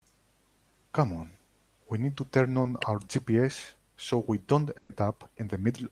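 Speech, with two transmission faults. At 2.63 to 2.67 s there is short concealed packet loss: about 20 ms of audio never arrived in time, and the decoder bridged the hole by extending the preceding sound before blending back, leaving a brief smear in the speech. At 4.77 to 4.91 s a burst of packet loss removes about 120 ms. The receiver stretches the last sound across the gap while fading it, producing a held, decaying fill with no silence, and the speech then resumes with that stretch missing.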